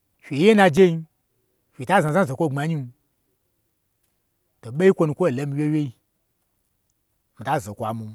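At 0.77 s and 2.09 s, a block of digital silence drops the speech out for about 2.2 ms and 0.7 ms (consistent with a 32-sample block), leaving abrupt-edged ticks.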